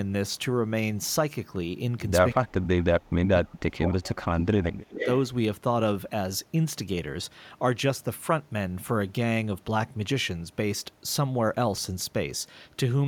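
Speech suppressed in double talk at 2.37 to 2.78 s and again from 3.1 to 5.06 s: the speech sinks abruptly, by about 25 dB in the first short dip and as much as about 35 dB in the longer one. This is likely an echo canceller that heard both sides at once, could not tell its own talker from the loudspeaker return, and attenuated everything.

Echo leak at 4.98 to 5.08 s: right as that long dip ends, a brief delayed copy of the speech surfaces about 285 ms behind the original and only a few decibels quieter, heard as a short scrap. The likely cause is a far end on a loudspeaker whose echo canceller left part of what its microphone picked up, sending that residue back down the line.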